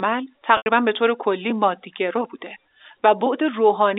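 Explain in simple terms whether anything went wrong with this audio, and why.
Packet loss with pitch repetition at 0.57 to 0.66 s: about 90 ms of audio went missing and was patched by looping the last pitch cycle, which sounds briefly buzzy and held.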